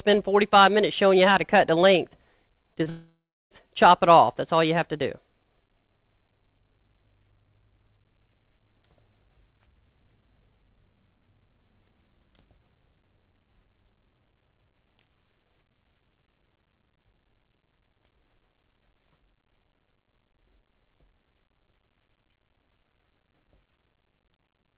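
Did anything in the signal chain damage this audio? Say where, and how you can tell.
Yes, at the network stage. Short concealed packet loss at 2.74 and 2.84 s gives brief smears where the receiver bridged about 20 ms gaps, unlike a clean clipping click.

A long network dropout, likely, runs from 2.89 to 3.52 s: the last sound continues and fades, then about 0.35 s of silence follows before audio resumes, with nothing above 4 kHz throughout.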